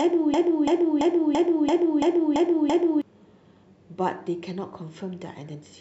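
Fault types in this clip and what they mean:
Broken-record loop: the clip opens already stuck, with a 0.34 s scrap of speech repeating back to back eight times until 3.02 s. Likely the player or stream stalled and kept replaying the last piece it held, so whatever belonged there is lost.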